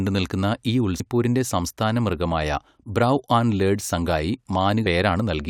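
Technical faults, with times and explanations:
0.99 s and 4.85 s: damaged data in a compressed stream. Each is a brief glitch lasting about 12 ms in the speech. Bytes in the compressed stream were corrupted there. The decoder misread those frames and lost sync, then found the next frame header and resumed.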